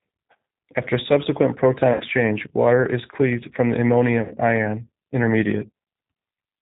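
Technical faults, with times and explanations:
Throughout: G.729 codec. Speech is rebuilt from a vocal tract filter, pitch predictor and sparse pulses, so it sounds band-limited below 4 kHz, rough and synthetic, consistent with 8 kbit/s.
1.93–2.03 s and 4.22–4.34 s: VoIP packet loss concealed by the speech codec. About 70 ms is lost after "subsequent proton", before "water is cleaved from", and about 80 ms after "is cleaved from the". The decoder stretches its last pitch and filter into a fading buzzy tone or coloured noise, and the voice stays weak or distorted for tens of milliseconds afterwards.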